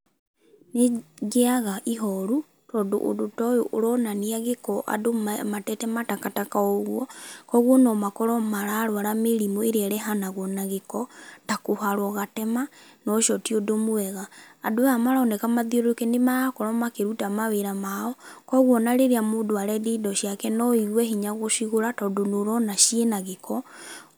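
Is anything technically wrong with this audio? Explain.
No, nothing in this speech recording stands out as a technical fault.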